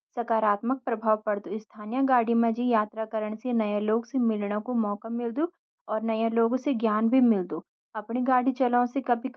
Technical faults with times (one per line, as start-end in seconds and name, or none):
none